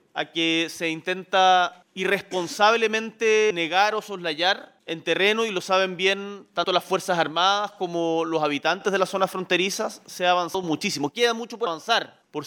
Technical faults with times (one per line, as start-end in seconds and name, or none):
3.50 compressed frames skipped
6.64 compressed frames skipped
10.54 compressed frames skipped
11.66 compressed frames skipped